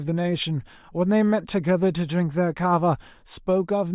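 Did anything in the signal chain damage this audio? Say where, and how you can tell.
No, nothing audible in this speech points to damage at any stage of the signal chain.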